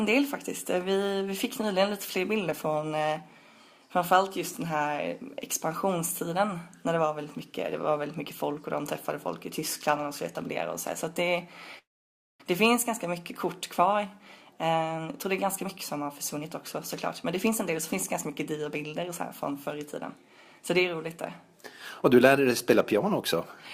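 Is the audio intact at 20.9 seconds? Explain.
No. At 20.9 s the audio falls inside a jitter buffer speed-up running from about 14.97 to 21.57 s. The receiver trims short pitch-period slices to drain an overfull buffer, about half a second in all, so playback runs roughly 9% fast at unchanged pitch and sounds hurried.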